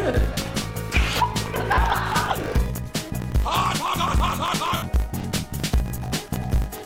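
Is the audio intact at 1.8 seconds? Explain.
No. The lost LE Audio frames span 1.75 to 1.78 s, ending just before 1.8 s. The LC3 decoder covers the 30 ms gap, which fits about three dropped frames, by reusing the last spectrum with random signs. Tones blur into a brief noisy smear, seen on a spectrogram as harmonic lines dissolving into broadband texture.

A block size mismatch (truncated) also runs through this moment. The end of each block is discarded, causing a 50 Hz buzz and playback about 1.16 times faster at roughly normal pitch, which fits 1024-sample blocks being cut short. The waveform shows discontinuities every 20 ms, and a spectrogram shows matching vertical lines.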